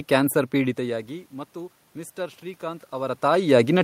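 Automatic gain rising affects this speech recording: after the input level dropped by about 16 dB, the gain control judged the signal too quiet and slowly raised its gain, by about 4 dB, from 0.76 s to 3.66 s. The voice creeps back up over those three seconds, and the room noise behind it swells by the same amount. The level changes around half a second and three seconds come from the talker shifting at the microphone.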